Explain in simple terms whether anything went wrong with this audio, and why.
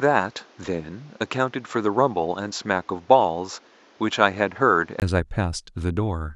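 The recording likely ran through an input switched to a poorer device from the start until 5.02 s. That path drops everything above 7.5 kHz, so the sound is dull and carries a faint extra hiss, then clears after a 20 ms gap.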